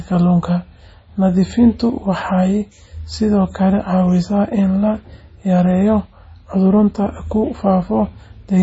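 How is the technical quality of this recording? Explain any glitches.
Heavy codec damage runs through the whole of the speech, and it is most likely MP3 compression. Nothing is present above 7.7 kHz, and the sound has a watery, swirling quality with smeared consonant onsets and chirpy s sounds. When bits are scarce, the encoder chops off the treble at a fixed point and drops faint frequency components, which flicker in and out between frames. The damage level fits a low bitrate around 24 kbps. A simple low-pass filter would dull the top end just as cleanly but would leave no swirl or chirping.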